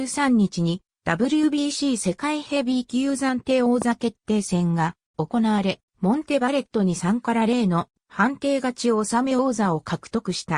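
A single loud pop lands at 3.82 to 3.84 s, a sharp thump standing roughly 10 dB above the surrounding sound, which carries on unbroken underneath it. That continuity separates it from a dropout or a buffer glitch, where the audio itself breaks or repeats. The pop is one brief pulse rather than a string of clicks. It is likely a voltage spike from a plug, a switch or static, briefly shaped by the downstream circuitry.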